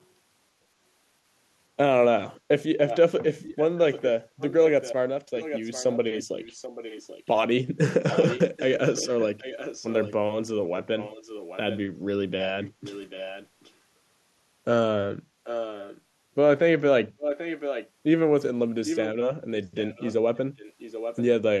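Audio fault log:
2.9–7.3 s, 8.1–10.1 s, 10.8–11.8 s, 12.4–13.7 s, 15.4–16.0 s, 17.2–17.9 s, 18.9–19.1 s, 19.8–21.2 s: echo leak. A copy of the speech returns 787 ms late, mostly about 15 dB below it, about 10 dB below at 15.4 s and about 5 dB below at 17.2 s and 18.9 s. The likely cause is a loudspeaker on the other end whose echo canceller let its microphone pickup back into the call.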